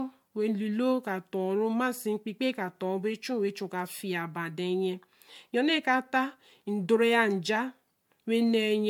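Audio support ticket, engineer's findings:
Generation loss throughout: likely several MP3 decode/re-encode passes near 100 kbit/s, each re-quantising on a shifted frame grid. The speech sounds swirly, hollow and smeared, with blurred attacks.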